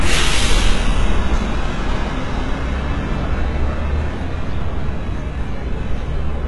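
Everyday sound, with HE-AAC compression damage throughout: treble stops near 11.4 kHz, and the top band sounds gritty and metallic, likely rebuilt by spectral band replication, consistent with heavy coding around 12 kbps.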